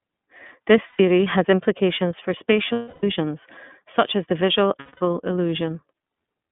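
An iLBC codec in the path codes this speech in 30 ms frames, consistent with its 13.33 kbps mode, confining it to 150 Hz–3.5 kHz and leaving it plainly rough and synthetic. Lost iLBC frames at 0.87–1.00 s (120 ms, before "has implications for"), 2.72–3.04 s (300 ms, after "has implications for") and 4.80–5.01 s (210 ms, after "such as the visual") force the decoder to repeat the last pitch cycle mixed with noise. Each gap is heard as a held, buzzy vowel before the voice snaps back.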